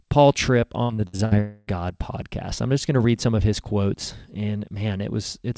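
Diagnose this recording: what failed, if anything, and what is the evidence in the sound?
Network stage, repeated packet loss (robotic sound). Between 0.83 and 1.34 s the audio turns choppy. Five separate holes open in that half-second, the longest about 65 ms, and roughly 240 ms of audio is missing in total. Nearly half of the stretch is patched rather than real. Each time packets fail to arrive, the receiver stretches the last decoded sound to cover the gap, and the next gap follows before the signal settles.

Network stage, long network dropout. From 1.40 to 1.70 s the sound becomes a buzzy smear of the preceding audio, lasting about 0.27 s and fading without ever reaching silence. The real signal then resumes on "podcast I'm", with the intervening audio gone. The likely cause is a single longer loss of the incoming stream, bridged end to end by concealment. The band limit at 8 kHz fits a G.722 wideband call path.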